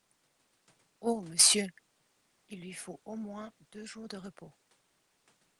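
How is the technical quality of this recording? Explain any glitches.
No glitches; only faint room noise sits under the speech.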